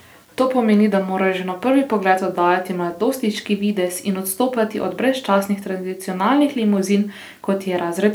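A speech clip with low bit depth without dither throughout, heard as a grainy, signal-following distortion that roughens quiet syllables and makes the softest tails sputter or drop to silence, sitting roughly 40 dB below the speech. The likely cause is rounding to a coarse grid, which fits about 9 bits. A zoomed waveform shows visible staircase steps on low-level passages, and a spectrogram shows a hazy noise floor that rises and falls with the speech and vanishes in pauses.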